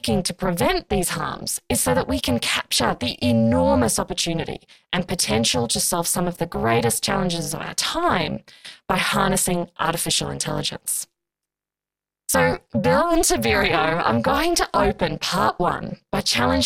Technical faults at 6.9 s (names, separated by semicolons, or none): overlap-add ripple